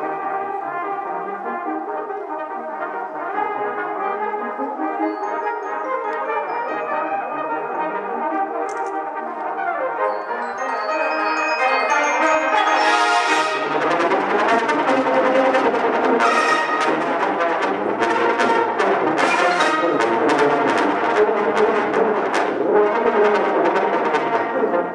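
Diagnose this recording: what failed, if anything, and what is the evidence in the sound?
Nothing in the recording points to a failure at any stage of the chain. There is no audible evidence of a fault to cite, and so no mechanism to explain.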